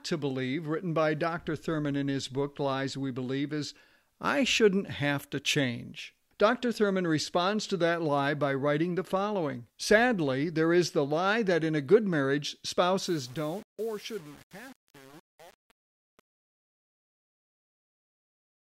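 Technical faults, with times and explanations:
13.02–18.71 s, truncation distortion on a fade: after "in a good marriage" the fade-out turns gritty. The waveform shows stair steps and the spectrogram shows broadband speckle, fitting undithered roughly 7-bit truncation.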